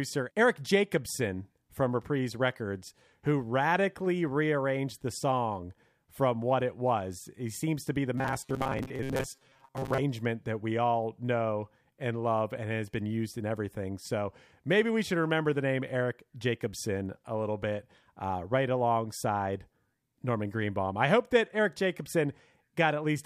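From 8.18 s to 10.00 s, between "seems to be the" and "that we all know", the speech turns into robotic sound from repeated short buffers: a rigid, metallic buzz at about 134 Hz that still loosely tracks the phrasing. This is likely caused by audio arriving too seldom, so a slice of roughly 7.5 ms is looped to fill the gaps, with around half the material repeated rather than new. A spectrogram shows evenly spaced horizontal harmonics at multiples of 134 Hz, and the waveform shows identical short cycles.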